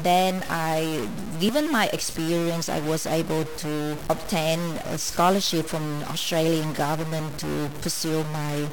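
Distortion runs through the whole speech recording, with noise filling the pauses, most likely from a stuck bit holding one data bit fixed in every sample. Two tiny skips occur, at 1.49 s between "then I" and "my experience I was", and at 5.47 s after "able to obtain a". They come 4 s apart, which matches the 4-second segment length. Each is an overlap between stream segments, where the player trims overlapping time stamps and drops a few milliseconds of real audio.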